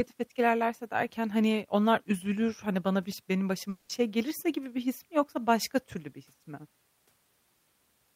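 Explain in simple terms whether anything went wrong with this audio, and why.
A long network dropout hits from 3.69 to 3.91 s, right after "hani bana biş benim". For about 0.2 s the real speech stops, and what you hear instead is the last bit of sound stretched out as a fading buzz. That's likely the receiver covering for audio that never arrived. Then the speech resumes at "şey gelirse gibi bir", but the 200 ms that went missing is simply gone.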